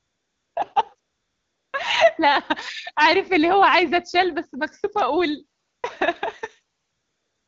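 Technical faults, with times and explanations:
0.00–0.55 s, 0.99–1.73 s, 5.63–5.83 s and 6.79–7.47 s, AMR comfort noise: the pauses switch to a smooth, steady hiss unlike the real background. The phone judged the talker silent and stopped sending speech frames, so the receiver generated noise from a rough level-and-spectrum sketch.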